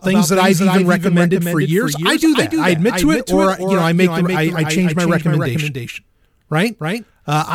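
Throughout, a doubled audio track trails the speech by roughly 300 ms, about 5 dB down and dry, likely a second capture path; spectrograms repeat every onset.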